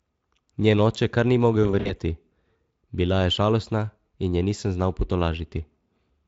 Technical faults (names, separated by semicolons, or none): VoIP packet loss concealed by the speech codec